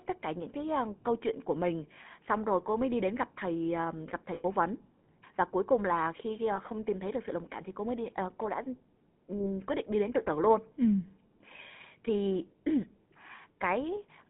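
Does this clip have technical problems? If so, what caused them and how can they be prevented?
Yes. The GSM full-rate codec affects the whole 14-second clip. It models the vocal tract and drives that model with a sparse, regularly spaced pulse train, so the speech takes on a buzzy, gravelly roughness. Nothing survives above about 3.4 kHz, and the lowest frequencies, below about 150 Hz, are also gone, so the sound is thin and band-limited, consistent with the 13 kbps full-rate coder. To prevent this, carry the call over a wideband codec such as AMR-WB or a modern VoIP codec instead of legacy GSM full rate.

Lost GSM frames cause dropouts at 4.34–4.45 s, just after "gặp thầy uh gặp" and before "vấn và cuối cùng"; at 6.56–6.59 s, between "cuối cùng là khi" and "không tìm thấy được"; and at 9.38–9.50 s, just before "quyết định đi đến". The first gap lasts 100 ms, which fits about five consecutive 20 ms frames. 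The other two are short single-frame losses. In each gap the decoder re-used the last good frame's parameters, so the sound smears into a brief rough, metallic ring. To prevent this, improve radio coverage and signal quality, or use a link with stronger error protection, so fewer frames are corrupted.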